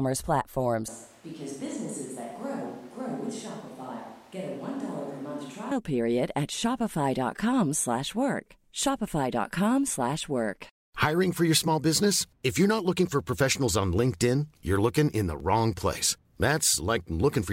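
From 0.88 s to 5.71 s the speech abruptly turns roomy and hollow, with thinner bass. It drops to about 10 dB quieter, and room noise rises to roughly 25 dB below the speech. At 5.71 s it snaps back to the close, full sound. This is a switch to a distant microphone. The likely cause is that the close microphone's signal dropped out or went unused, so the recording fell back on a mic farther away that picks up more of the room.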